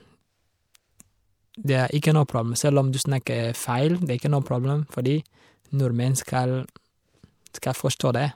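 Pre-echo appears at 3.25 s, 6.67 s and 7.99 s. The transform codec spread quantisation noise across a whole block, so a brief hiss of about 18 ms, then 14 ms twice, precedes each sharp attack and softens its onset.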